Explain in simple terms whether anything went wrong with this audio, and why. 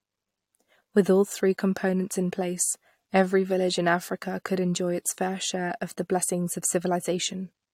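Nothing went wrong with this speech recording. No dropouts, glitches or other faults can be heard anywhere in it.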